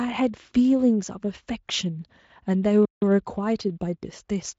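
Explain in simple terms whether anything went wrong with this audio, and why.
A playback stall hits at 2.85 s: the speech cuts out mid-flow and stays silent for about 0.17 s, until 3.02 s. The likely cause is that the player ran short of incoming audio, or was briefly held up, and had nothing to play.

Time-compressed catch-up follows from 3.02 to 4.46 s. To make up the lost time, the player snips out tiny slices and blends the gaps, so the speech runs about 1.1 times faster. It sounds hurried but keeps its normal pitch.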